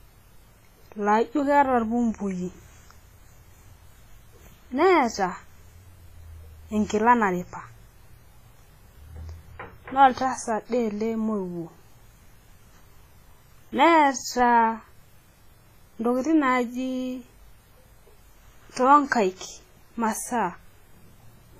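Throughout the speech, a washy, ringing hiss rises and falls with the signal, and nothing remains above 15.2 kHz. This is heavy damage from WMA compression, likely at a bitrate around 24 kbps. Unlike steady background noise, this hiss tracks the speech, smeared over tens of milliseconds.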